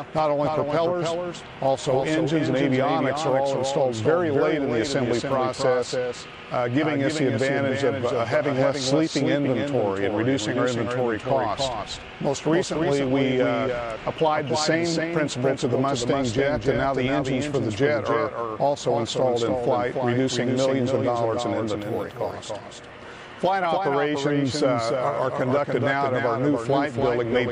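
The audio carries a doubled audio track for its whole length: a second, full-band copy of everything trails the original by roughly a third of a second, only about 5 dB quieter, with no decay or added room colour. The likely cause is the same source reaching the mix twice, once through a slower capture path. On a waveform every onset shows a slightly smaller twin shortly after; a spectrogram shows each event repeated as a fainter, identical shape shifted right.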